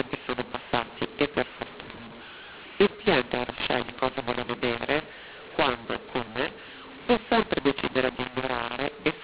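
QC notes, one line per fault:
Throughout, mu-law and A-law mixed up. The speech was coded with G.711 A-law but decoded as mu-law. Each 8-bit code maps to the wrong level on the logarithmic scale. Some samples come out too loud, others too quiet, so the speech sounds harsh and distorted. The quietest codes land well above silence, so the pauses fill with noise. The telephone band itself is intact, with nothing above 4 kHz, as 8 kHz coding implies.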